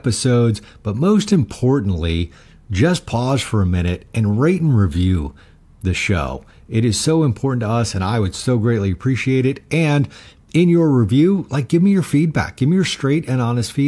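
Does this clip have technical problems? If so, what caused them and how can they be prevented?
No, nothing technical goes wrong anywhere in this speech recording, so there's nothing that needs preventing.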